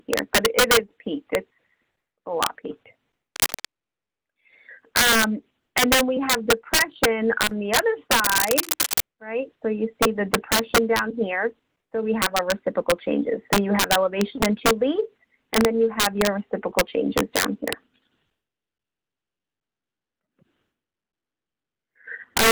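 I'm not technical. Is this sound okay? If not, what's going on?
No, there are two problems. The first is integer overflow, present all the way through. The loudest peaks push past the biggest number the system can store and flip to the opposite extreme instead of being capped. That gives harsh, violent cracks on a small fraction of the loudest moments, much sharper than ordinary distortion.

The second is cable scratch noise, a burst of scratchy rustling at 3.36 to 3.65 s and again at 8.19 to 9.01 s, roughly as loud as the sound itself. It's likely a worn cable or connector being moved, so the contact flickers.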